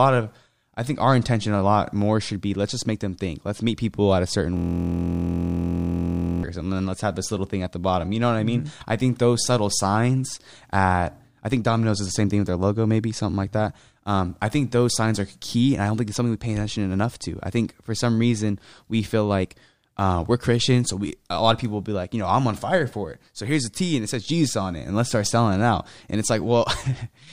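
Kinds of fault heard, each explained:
System hang loop: Just after "people at a certain", from 4.57 to 6.43 s, the speech freezes into a steady, rough buzz pitched at about 43.1 Hz, made of a single 23.22 ms sliver repeated about 80 times over. The driver or system stalled while the sound hardware kept replaying the same ring buffer, and a loop this short fits a 1024-sample buffer, which is why it fuses into a hum rather than a stutter.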